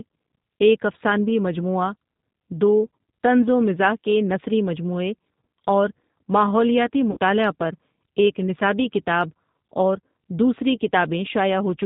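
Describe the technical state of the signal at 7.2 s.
VoIP packet loss concealed by the speech codec, from 7.11 to 7.18 s: the decoder stretched its last pitch and filter across a roughly 60 ms gap, consistent with three lost packets, into a fading buzzy tone or coloured noise. The voice stays weakened just past 7.2 s while later frames rebuild. Throughout, G.729 coding at 8 kbit/s rebuilds the voice from a filter and sparse pulses, leaving it band-limited below 4 kHz and slightly rough, with plainly audible coding damage.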